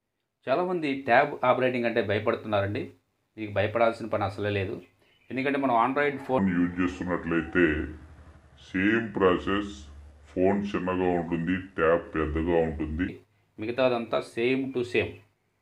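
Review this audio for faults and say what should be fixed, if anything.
From 6.39 s to 13.09 s there is a section at the wrong speed: the sound plays back at 0.743 times its proper rate, so everything slows and drops by about five semitones, then snaps back to normal. The likely cause is playback or an edit clocked at the wrong rate. On a spectrogram, harmonics shift down and stretch horizontally across that span, and the waveform's cycles widen visibly. Check that every segment's sample rate matches the project clock before rendering.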